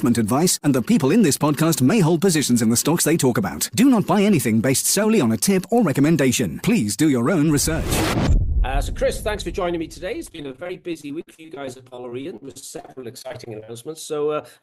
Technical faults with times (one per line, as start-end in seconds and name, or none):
10.26-13.70 repeated packet loss (robotic sound)